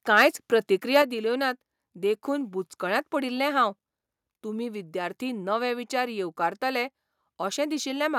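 A harsh, crackling edge breaks up the speech from 0.17 to 0.27 s and again at 0.95 to 0.97 s. The likely cause is microphone overload: input gain set too high, so peaks run about 6 dB and then about 2 dB past the converter's ceiling and get flattened, clipping a few percent of samples. Right after, at 1.02 s and just before "दिल्योनात देखून बुचकळ्यांत पडील्लें", voice and background drop together by about 5 dB. The sudden step likely comes from the microphone volume being stepped down by software reacting to that overload.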